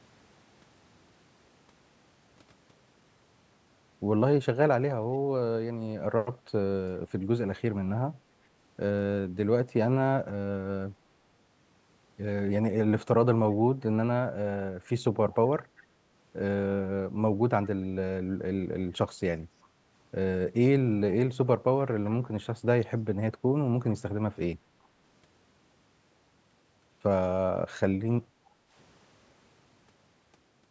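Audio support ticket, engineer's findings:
Echo leak, 24.83–24.87 s: brief, very faint repeat of the speech, roughly 40 dB below it, trailing the original by about 391 ms. Likely the far end's echo canceller passing a scrap of loudspeaker pickup back down the line. Spectrogram: a ghost copy of the preceding speech's harmonic pattern, shifted 0.39 s later and barely above the floor. Waveform: a tiny low-amplitude blip, almost invisible.

Background gated by the echo canceller, 28.26–28.72 s: room sound dips by up to about 10 dB for roughly half a second, then recovers. Echo canceller suppressing the microphone while its loudspeaker played, releasing afterward. Spectrogram: broadband noise floor visibly darker across the full band up to the normal 8 kHz ceiling of the call path. Waveform: noise envelope notched down, then restored.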